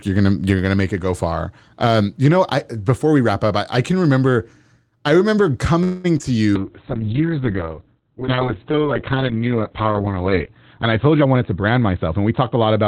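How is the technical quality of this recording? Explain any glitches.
The recording has clear network-call faults in its second half: a stall, a short dropout, a long drop in audio quality, and a hurried stretch near the end.

From 5.83 to 6.06 s, right after "can remember I remember", there is a call audio freeze. The sound stretches into a fading buzz or hiss, likely from delayed packets emptying the jitter buffer, and this adds a 208 ms gap. A spectrogram shows the last sound smeared and thinning out.

At 6.18 to 6.22 s there is a short concealed packet loss. About 20 ms of audio is lost, and the receiver patches about 14 ms of it with an extrapolation, which is heard as a brief smear. It appears as a tiny blurred patch in the waveform.

From 6.57 s to the end there is a call bitrate drop from 32 to 6 kbps. It stays at its lowest for about 3.7 s and cuts the bandwidth from 20 kHz to 4 kHz, so the sound becomes muffled and watery. 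A spectrogram shows everything above 4 kHz going blank.

From 11.21 to 12.57 s a jitter buffer speed-up removes roughly a fifth of a second of pitch periods. Playback runs at 114% speed with the same pitch and sounds hurried. In the waveform the syllables appear packed closer together.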